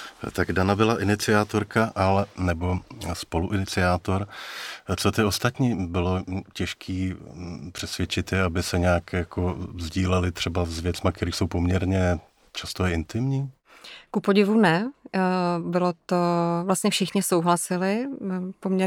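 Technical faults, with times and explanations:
No technical faults can be heard in this recording.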